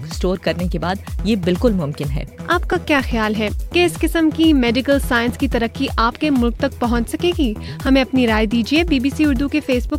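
From 0.15 s to about 9.15 s, a short click recurs every 1.29 s, about seven in all. These are clock drift buffer slips, likely from two devices running on separate clocks that differ by roughly 1000 ppm, so the buffer between them periodically drops or repeats a block of a few dozen samples. On a waveform each slip shows as a discontinuity; on a spectrogram it appears as a thin vertical broadband line at evenly spaced intervals.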